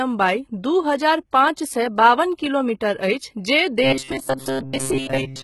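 HE-AAC compression runs through the whole speech clip. The treble is likely rebuilt by spectral band replication, with lower bands copied upward under a coarse envelope, so upper harmonics and s sounds don't match the original. The damage is heavy, nothing remains above 11.8 kHz, and the sound fits a bitrate around 16 kbps.

Robotic sound from repeated short buffers begins at 3.83 s and continues to the end at 5.44 s. New audio likely arrived too seldom, so short stretches were replayed in place of real audio, roughly 70 percent of the time. This imposes a rigid 133 Hz buzz, which fits a buffer of about 7.5 ms.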